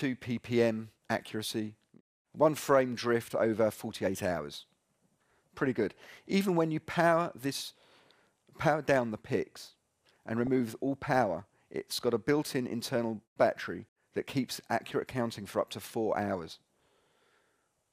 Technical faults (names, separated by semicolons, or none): DAB burbling